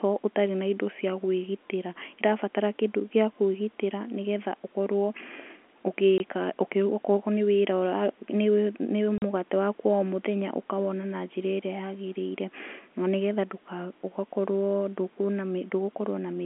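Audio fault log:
6.18–6.20 s and 9.18–9.22 s, packet loss filled with silence: the speech drops out for 20 ms, then for 40 ms just before "mũgate waku wa". These gaps fit one and two lost 20 ms packets replaced by silence. Their edges are abrupt against the narrowband telephone-coded sound.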